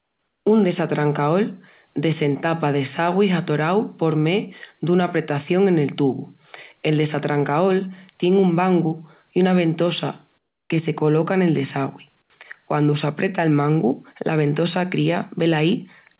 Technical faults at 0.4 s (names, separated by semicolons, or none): comfort noise in place of the background